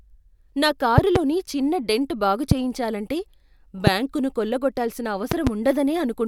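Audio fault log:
0.98–1.18 s, 2.51–2.54 s, 3.87–3.90 s and 5.32–5.49 s, loud pop: a sudden voltage step or pulse, likely from a connector, switch, static discharge or driver glitch, enters the chain and is shaped by the stages after it. Each one is a sharp pop about 15 to 20 dB above the speech, which continues underneath. The first, just before "చిన్న డెంట్ బాగు చేయించాలంటే", and the last are double pops. The second comes right after "చిన్న డెంట్ బాగు".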